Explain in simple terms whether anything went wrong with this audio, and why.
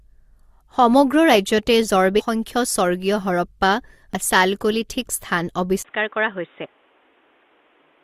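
A couple of things went wrong here, of two kinds.

First, there's damaged data in a compressed stream, heard as two quick blips, one from about 2.18 to 2.21 s and another at 4.14 s. At those spots a few bytes of the compressed file were garbled, so the decoder couldn't make sense of that bit, lost its place, and had to hunt for the next clean chunk to pick up from.

Then at 5.83 s the speech suddenly goes dull and boxy and stays that way to the end. There's a brief gap of about 20 ms right at the change, the sound gets a bit quieter, and a faint new background noise comes in. Nothing above roughly 3.8 kHz gets through after that point, which takes away the crisp top end. That's most likely an input switched to a poorer device, meaning the recording jumped to a cheaper mic or a headset's call mode partway through.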